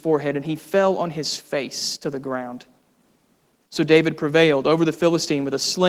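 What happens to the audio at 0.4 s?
Nothing goes wrong at 0.4 s; the speech there is intact, with no dropout, click or distortion.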